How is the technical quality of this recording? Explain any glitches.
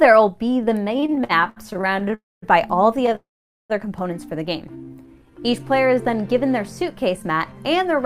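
The quality is poor: the network delivery broke down repeatedly, producing stutter, two dropouts and a stretch of slowed playback.

From 0.97 to 2.14 s there are repeated stalls (stutter). Packets arrived late and the jitter buffer kept running dry, so the receiver extended the last sound about 24 times, with the longest fill 67 ms. Roughly a third of that span is patched-in sound, and the audio judders and drags.

At 2.14 to 2.44 s and 3.15 to 3.72 s come two call audio freezes, likely from packets held up in transit emptying the buffer. The receiver stretched the last sound into a fading tail, then near-silence, for about 280 ms and 540 ms. Playback resumes where it stopped, so the sound is delayed rather than lost.

From 4.76 to 6.22 s a jitter buffer slow-down follows. With its reserve low, the receiver repeated tiny pitch-period slices to rebuild it, adding about 200 ms. The sound plays at about 87% speed with unchanged pitch, so it feels drawn out.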